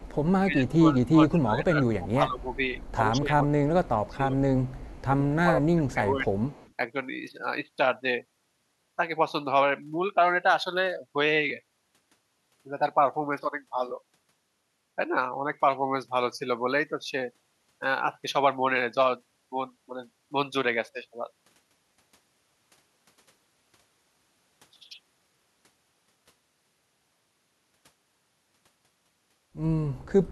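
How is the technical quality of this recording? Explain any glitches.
The first seven seconds are rough, with two related call-path problems.

Echo leak at 0.0–0.25, 1.05–1.09, 2.41–2.92, 3.85–5.02 and 5.88–6.73 s: a faint copy trails 123 ms behind, about 30–35 dB down, likely loudspeaker sound the echo canceller missed.

Speech suppressed in double talk at 0.37–2.45, 3.11–4.34 and 5.18–6.25 s: the speech dips by up to about 15 dB in patches, likely the canceller ducking everything while both sides overlapped.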